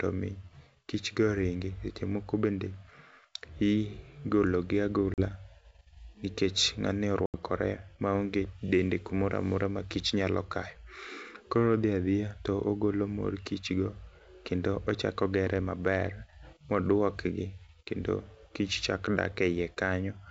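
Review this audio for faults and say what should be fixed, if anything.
Packet loss on an ADPCM call at 5.14 to 5.23 s (40 ms lost, a couple of packets) and 7.26 to 7.37 s (80 ms, a few packets). The G.722 stream at 64 kbit/s drops to silence, then its predictor and step size resume out of step with the sender's. On a spectrogram each gap is a hard-edged blank column, followed by briefly distorted energy as the decoder settles. The waveform shows a sudden flat stretch. Add packet loss concealment and decoder state resynchronisation, with jitter buffering or redundancy, so lost packets don't leave holes or desynchronise the ADPCM decoder.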